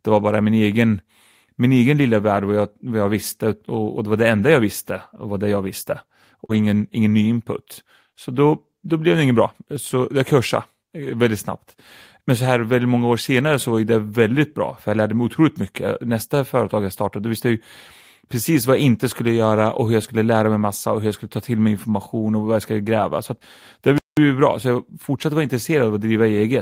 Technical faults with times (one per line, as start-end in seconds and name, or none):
6.45-6.51 short concealed packet loss
6.49-6.59 lost packet rebuilt from error correction
23.98-24.17 playback stall